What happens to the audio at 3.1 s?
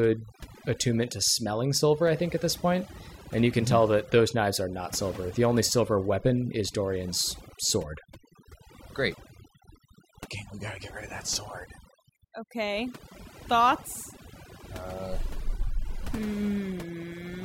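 At 3.1 s the speech carries overdone noise removal, present throughout the clip: bands near the estimated noise floor are pushed to near silence, taking quiet speech detail with them. The background breaks up into twinkling specks, and a spectrogram shows a blank background dotted with isolated bright flecks.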